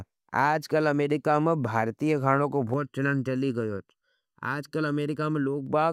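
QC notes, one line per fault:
2.74–5.67 s, channel delay (comb filtering): one channel runs late by well under a millisecond, and once the two are summed to mono, their common content cancels in evenly spaced notches starting around 700 Hz. The speech turns hollow and phasey.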